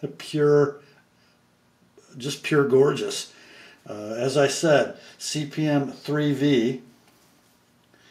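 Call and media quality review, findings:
Nothing stood out on listening, and there are no findings to log for this clip.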